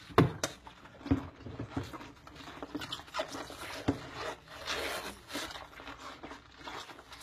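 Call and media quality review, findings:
Computer activity noise, throughout: buzzy, chirping pulse train near 70 Hz, roughly 35 dB under the signal. It tracks host processor/GPU load on the shared audio ground, not the program material. Unlike steady mains hum, it wavers and stutters with computer activity.

HE-AAC compression, likely cause, throughout: plainly audible gritty, metallic treble, nothing above 14.9 kHz. Upper band is rebuilt by spectral band replication, so its harmonics misalign with the lower band. Consistent with about 20 kbps. Unlike plain lowpass dulling, the top stays bright but synthetic.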